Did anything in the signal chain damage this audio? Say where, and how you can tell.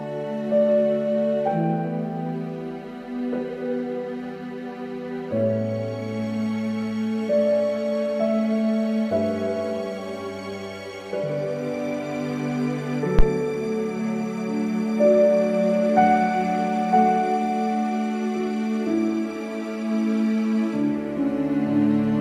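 Yes, a phantom power thump in the analogue input at 13.19–13.26 s, peaking at about −6 dBFS: one deep pulse dying in 16 ms, a supply step through coupling capacitors rather than a handling knock's irregular rumble.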